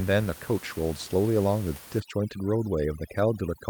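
From 2.0 s to the end at 3.7 s, overdone noise removal takes hold. Before that point, the room noise sits about 18 dB below the speech. Then a noise reduction stage set far too strong starts cutting individual frequency bands whenever they come near its noise estimate. The background drops and breaks up into twinkling specks. Quieter parts of the speech get cut along with the noise.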